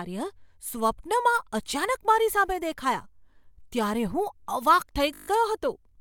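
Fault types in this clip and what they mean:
System hang loop: the machine stalled while the hardware kept replaying one 20 ms buffer, so a seven-fold repeat comes through as a brief 50 Hz buzz.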